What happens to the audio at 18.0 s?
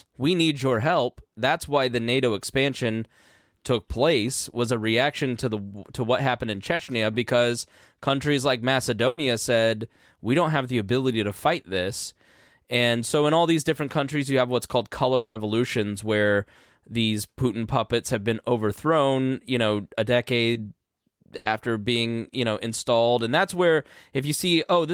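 Nothing goes wrong at 18.0 s: the speech continues intact through that moment, with no dropout, click, distortion or other audible fault.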